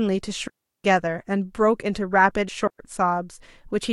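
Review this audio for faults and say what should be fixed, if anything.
Two digital wireless dropouts break this speech, from 0.48 to 0.84 s (a 0.37 s mute) and from 2.67 to 2.79 s (0.12 s). The receiver lost too much of the link's data and muted with a very short fade, leaving clean near-silent holes. Unlike an analogue dropout, there is no hiss or noise burst on either side. A stronger radio path, with better antenna placement and clear line of sight, would prevent them.

At 2.48 s, compressed frames were skipped. The audio jumps ahead by roughly 70 ms, which points to about four frames that were missing from the file or rejected as damaged. No silent gap is left either, which sets it apart from the mutes. Checking file integrity and re-encoding from a clean source would prevent it.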